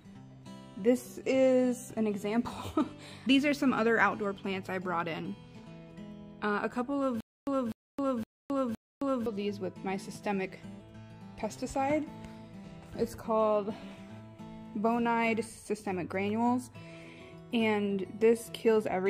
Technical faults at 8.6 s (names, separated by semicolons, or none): stutter with silent gaps